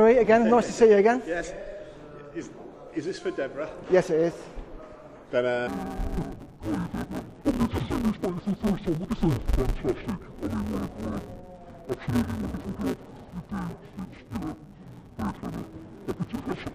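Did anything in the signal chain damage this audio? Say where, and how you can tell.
Yes. From 5.67 s to the end, a sample-format conversion stage has treated interleaved stereo as interleaved audio read as planar. Each short block of alternating left and right samples was split down the middle, with the first half sent left and the second half right. The blocks last about 5.8 ms, which fits a 256-sample block, so they are too short for an octave drop. The sound turns dull and robotic, with a steady 172 Hz buzz at the block rate.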